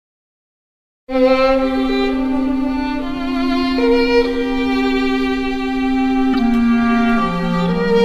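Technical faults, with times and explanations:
6.33–6.39 s, corrupt frame decoded: a sharp, squeaky burst of noise that jumps close to full scale. Flipped bits in a few compressed frames were decoded anyway, so misread gains and codes put energy at the wrong frequencies for those frames.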